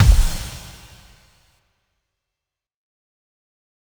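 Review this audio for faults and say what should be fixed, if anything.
Sample clock jitter runs throughout, a hiss that swells with loud, bright passages and vanishes in silence. Timing wander of roughly 10 µs leaves error about 25 dB below the signal. On a spectrogram, broadband haze tracks high-frequency energy; the waveform looks clean. Prevent it with a stable, low-jitter converter clock.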